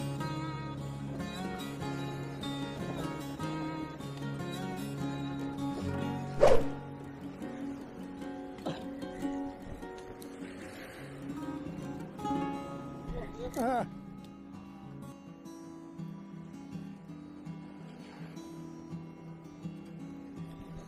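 No technical faults can be heard anywhere in the recording. The audio runs without any dropouts, glitches or interruptions.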